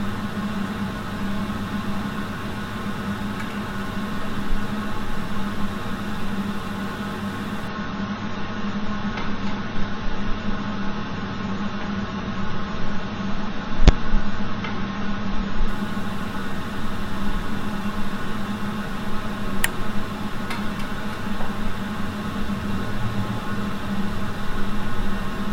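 From 7.68 s to 15.68 s the player dropped to an adaptive stream at a lower bitrate, most likely because the connection slowed, and held that rendition for 8 seconds. The switch lands abruptly with no gap: the treble collapses to nothing above about 7.6 kHz, leaving the sound dull and boxed, with codec artefacts rising, consistent with a fall from roughly 96 kbit/s to about 24 kbit/s AAC. The higher bitrate snaps back at 15.68 s.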